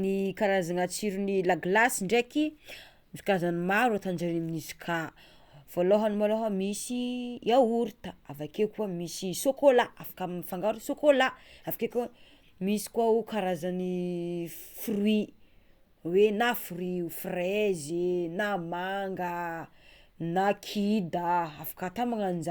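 Speech recording, no faults heard.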